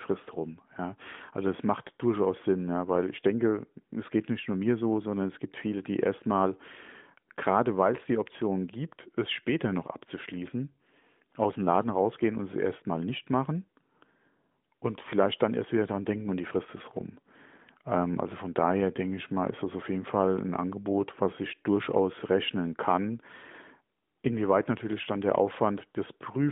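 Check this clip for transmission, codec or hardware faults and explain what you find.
Nothing here points to a transmission, codec or hardware fault; the speech carries the narrowband, phone-line character of a mobile call coded with AMR-NB at 12.2 kbps, and the codec's light touch doesn't break into anything you'd call a defect.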